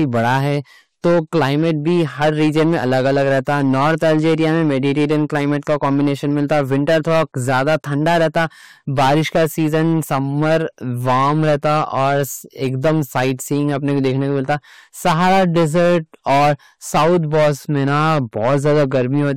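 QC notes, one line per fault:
throughout hard clipping: harsh fuzz on every loud syllable, as the signal is driven about 15 dB past the limit and roughly a tenth of samples are cut flat.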